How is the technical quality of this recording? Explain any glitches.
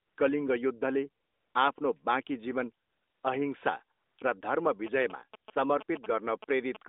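The recording has two kinds of glitch riding on a narrowband mobile line.

AMR comfort noise shows up five times: 0.0–0.18 s, 1.24–1.54 s, a brief blip at 1.74 s just before "बाँकी जीवन", 2.86–3.24 s between "बाँकी जीवन" and "अहिंसा र धर्म", and 3.98–4.18 s just before "र धर्म". In each gap the phone stopped sending speech, and the receiver synthesised smooth, steady noise in place of the real background, so the hiss switches in and out.

GSM signalling bursts run from 4.87 to 6.77 s, about 15 dB below the speech. A nearby 2G phone was signalling in short radio bursts, and the audio circuit rectified them into a galloping dit-dit-dit of short 217 Hz buzzes.

The band is limited to about 250 Hz to 3.7 kHz, which fits AMR-NB at 12.2 kbps.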